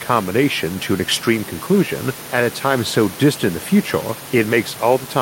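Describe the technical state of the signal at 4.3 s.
At 4.3 s the audio is intact, with only the room's own background noise sitting about 19 dB below the speech.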